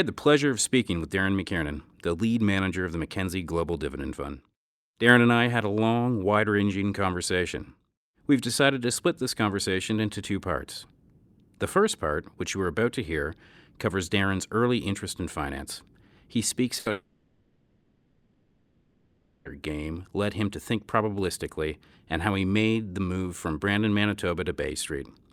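At 16.79 s a burst of packet loss cuts about 60 ms of the speech, ending at 16.87 s. The receiver stretches the last sound to cover it, a brief held buzz or hiss that fades. On a spectrogram the last sound's spectrum is held as steady, dimming bands; the waveform repeats as it fades.

From 16.91 s to 19.47 s the audio is replaced for about 2.5 s by a synthetic fill that never drops to silence, a dull, fading tone or hiss that persists throughout. The likely cause is a long network dropout. The spectrogram shows a smeared, featureless stretch, and the waveform a low, uniform envelope until the speech resumes.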